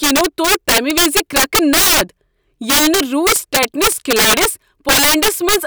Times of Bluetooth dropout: none

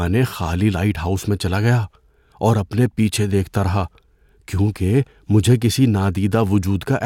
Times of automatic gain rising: none

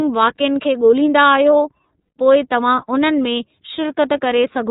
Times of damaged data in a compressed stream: none

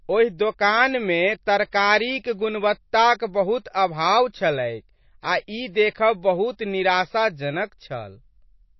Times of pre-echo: 1.46-1.73

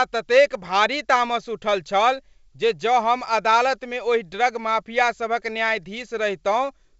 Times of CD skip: none

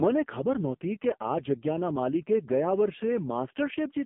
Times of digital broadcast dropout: none

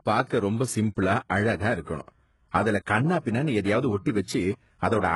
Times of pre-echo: 1.82-1.87

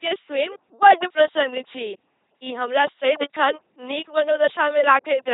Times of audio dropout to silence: none

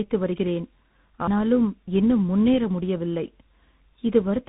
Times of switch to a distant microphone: none

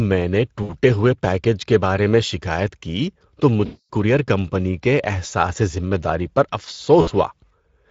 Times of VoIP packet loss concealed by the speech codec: 0.63-0.71, 3.65-3.89, 7.01-7.09

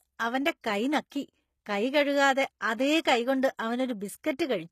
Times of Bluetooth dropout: none

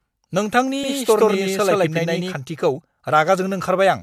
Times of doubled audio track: 0.83-2.33

